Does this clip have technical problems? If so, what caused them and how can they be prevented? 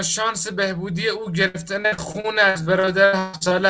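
Yes. From 1.48 to 3.53 s the speech breaks up through repeated packet loss. More than a dozen holes, the longest 143 ms, are each patched by stretching the last sound, leaving about a third of that stretch choppy and robotic. Unlike a single dropout, the gaps keep recurring in quick succession. A steadier network connection, or a larger jitter buffer with forward error correction, would prevent it.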